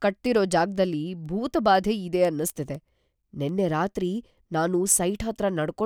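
From 0.26 s to 5.73 s, word clock ticks recur about every third of a second, around twenty in all. A receiver clocked about 100 ppm off the sender slips one sample per slide. Their even spacing sets them apart from random clicks.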